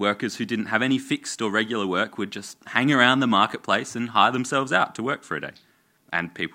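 Nothing in this bit of speech stands out as a technical problem; it just runs along without any glitches worth pointing to.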